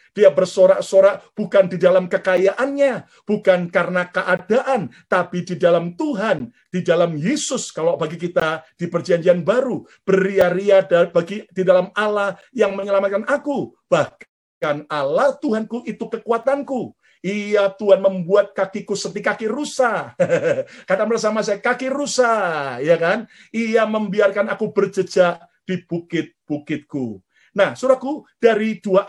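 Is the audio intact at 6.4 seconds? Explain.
No. At 6.39 s there is a gap between stream segments: the timestamps of adjacent 2.0 s segments leave about 13 ms unaccounted for, and the player fills that hole with silence. It is heard as a brief, hard-edged dropout, though no audio content is lost.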